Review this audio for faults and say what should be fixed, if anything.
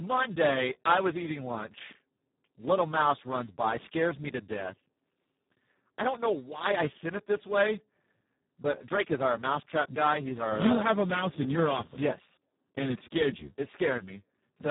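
The whole clip carries Speex codec damage, and it is heavy. The speech sounds hoarse and noisy. Nothing is heard above 3.8 kHz, so the sound is dull and boxy. Speex is a CELP codec. At its lowest settings it has very few bits to describe the excitation, so it behaves almost like a vocoder. The result fits a very low bitrate of about 4 kbps. To prevent it, record or transmit with a higher-quality codec setting or a modern wideband codec.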